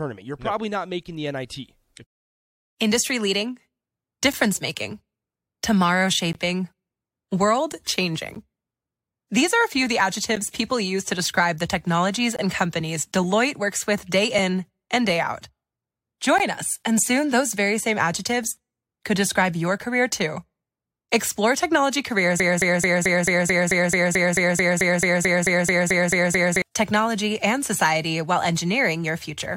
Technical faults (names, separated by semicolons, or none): gap between stream segments; broken-record loop